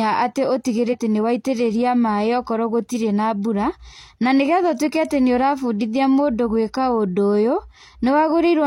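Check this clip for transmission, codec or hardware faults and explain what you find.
One codec fault appears in the speech, near the start. From about 0.89 to 0.95 s there is damaged data in the compressed stream. Some bytes in that stretch of the encoded file were corrupted, so the decoder could not parse those frames correctly, lost frame sync and had to hunt for the next valid header before resuming. The roughly 60 ms affected comes out as a brief squawk or blip in place of the speech, after which decoding recovers.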